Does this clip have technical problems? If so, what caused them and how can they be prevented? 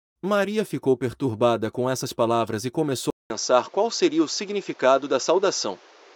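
Yes. At 3.10 s there's a 0.2 s gap, then the speech loses everything above 7.6 kHz until the end, with fresh background noise roughly 30 dB down. That points to an input likely switched to a poorer device. Lock the recording input so nothing can grab it mid-take.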